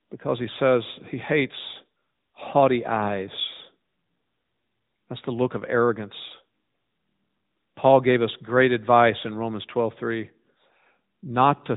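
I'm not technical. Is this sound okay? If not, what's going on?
No. From start to finish the speech has passed through the AMR narrowband mobile codec, a phone-call compression. Nothing above about 3.8 kHz survives, so it sounds boxed-in, and the voice turns clearly buzzy and synthetic. Simple muffling would dull the sound without that artificial, robotic texture.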